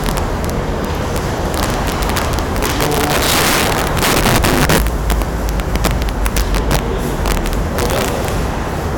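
Integer overflow runs through the whole recording. The signal was driven about 14 dB past full scale in integer arithmetic, and instead of being limited at the maximum value, each excessive peak wrapped around to the opposite extreme. Only a few percent of samples cross that limit, but every one jumps across the entire range, so the loudest moments break into violent, harsh cracks that are far sharper and more abrupt than ordinary clipping.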